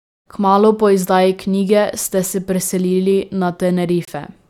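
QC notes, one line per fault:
4.05–4.09 s, Bluetooth dropout: the speech cuts to silence for about 39 ms, then picks up further along, as though it had kept playing through the gap. The likely cause is a packet that reached the headphones too late and was discarded. The gap fits one lost frame of about 21 ms. Unlike an edit cut, nothing is spliced shut. Unlike the gentle fade-in over the opening 0.3 s, the level drops hard.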